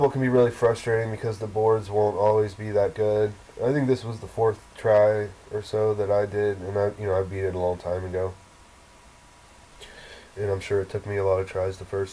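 No faults can be heard in this recording. Nothing breaks up, drops out or gets distorted anywhere in the audio.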